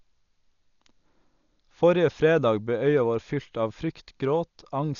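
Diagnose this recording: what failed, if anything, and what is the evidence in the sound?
The failure is at the codec stage, and it runs through the whole recording. Nothing reaches above 6.9 kHz, so the speech sounds dull and boxed in. Voiced sounds carry a rough, fluttering noise, and the damage is heavy. The likely cause is Dolby Digital compression at a low bitrate, consistent with about 48 kbps. Starved of bits, the encoder narrows the band and leaves many frequency lines empty. The decoder then fills them with noise.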